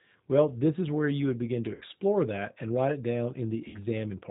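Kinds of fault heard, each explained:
G.729 codec, throughout: The speech sounds band-limited, with nothing above 4 kHz, and has a plainly audible rough, slightly synthetic edge that fits the 8 kbit/s G.729A coder. Instead of storing the waveform, this codec resends a vocal tract filter, a pitch predictor and a handful of excitation pulses every 10 ms. The rebuilt speech therefore stays intelligible but thins and coarsens in timbre.
VoIP packet loss concealed by the speech codec, at 1.75 to 1.82 s and 3.68 to 3.80 s: In each place about 60 ms of audio never arrived, which fits three 20 ms packets. The decoder filled each gap by continuing its last pitch and filter settings at steadily lower gain, so the sound smears into a fading buzzy or coloured tone. Because each frame is predicted from the previous one, the speech stays weakened briefly after real data resumes.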